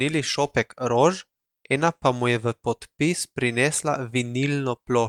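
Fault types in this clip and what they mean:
Nothing to flag here, as this bit of speech comes through with no technical faults to speak of.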